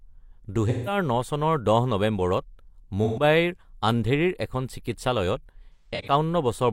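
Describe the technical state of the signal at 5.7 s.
At 5.7 s the speech hits AAC frame loss with concealment, from 5.74 to 6.13 s. About 213 ms of audio is missing, in gaps spread across 341 ms. The longest gap runs about 150 ms. The decoder patches each hole from the last good spectrum, leaving a smeared, noisy, phasey stretch.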